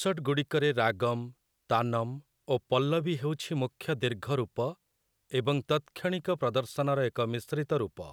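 No technical faults are audible anywhere in this speech recording.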